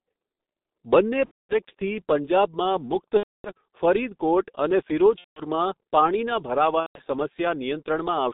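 From the start, the speech carries heavy G.723.1 codec damage. The band runs only from about 200 Hz to 3.7 kHz, which gives the muffled telephone quality. The coarse, hoarse texture and smeared consonants fit the 6.3 kbit/s mode, where the vocal-tract model is refreshed only once per 30 ms frame and cannot follow fast articulation.

VoIP packet loss concealed by the speech codec occurs four times: 1.25 to 1.55 s, 3.17 to 3.51 s, 5.18 to 5.42 s, and 6.80 to 7.01 s. The spans hold about 240, 270, 180 and 150 ms of lost audio, which fits runs of eight, nine, six and five lost 30 ms frames. In each span the decoder keeps repeating its last pitch and filter at a falling gain, so the speech stretches into a fading buzzy tone or coloured noise that is muted from the third lost frame onward. When packets resume, the voice stays weak or distorted briefly while the decoder's frame-to-frame state recovers.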